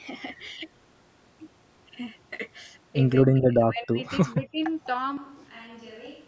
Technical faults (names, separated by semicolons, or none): speech suppressed in double talk; switch to a distant microphone